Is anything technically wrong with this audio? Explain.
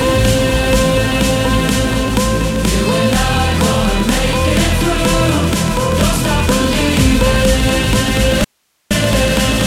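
Yes. From 8.44 to 8.91 s there is an audio dropout to a faint residue. The sound cuts out abruptly for about 0.46 s, likely because the signal was lost upstream while the path after the break stayed live, leaving only hiss about 50 dB down. The waveform collapses to a thin noise band with sharp edges, and the spectrogram shows a dark, evenly speckled vertical gap.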